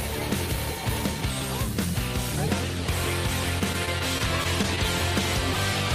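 From about 3.59 to 4.79 s you get repeated stalls, a stutter: packets arrived late, the jitter buffer kept running dry, and the last bit of sound got stretched over eight short gaps, none over 15 ms. Nothing's lost, but that stretch hiccups and drags.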